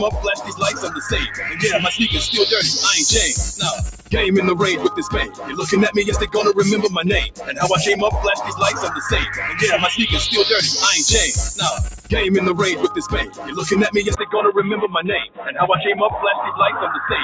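What you've got here is non-speech audio running through a noise suppressor built for speech, left on the whole way. It keeps treating sustained tones, ambience and decay as noise, so the level swings by roughly 10 dB as it grabs and releases. Transients punch through while anything held sinks, giving that pumping, fluttery, thinned-out feel.

Those grabs turn into clear dips where the sound gets cut by the noise suppressor:
0.35 to 1.1 s (about 11 dB down),
1.28 to 1.62 s (about 6 dB),
3.92 to 4.13 s (about 15 dB),
5.26 to 5.55 s (about 12 dB),
7.31 to 7.61 s (about 16 dB),
11.92 to 12.12 s (about 15 dB),
13.05 to 13.57 s (about 12 dB), and
15.27 to 15.53 s (about 16 dB).
In each one a steady or fading stretch drops away or has its tail chopped short.

Then at 14.15 s there's a 20 ms gap and the tone turns dull. The level falls a few dB, and a faint new noise floor shows up, well below the signal. 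That's most likely the input switched to a poorer device, say a headset's call profile, and it stays dull and boxy to the end. Before the switch the band tops out at 8 kHz, which is just the normal call microphone path.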